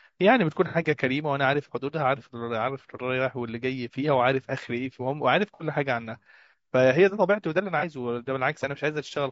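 It's a speech clip with a rough, grainy texture the whole way through. That's likely low-delay AAC compression, the AAC-ELD flavour used on video calls. Its short frames can't pin down the pitch harmonics well, so noise fills the gaps between them and the top end sounds thin and a bit synthetic, which fits a bitrate around 32 kbps. On top of that there's AAC frame loss with concealment in three spots: 0.68 to 0.76 s, 5.54 to 5.63 s and 7.79 to 7.84 s. Each one is a brief smeared, phasey patch where the decoder is patching over missing audio by reusing the last good spectrum. The first two sound like a couple of frames dropped back to back, and the last one like just a single frame.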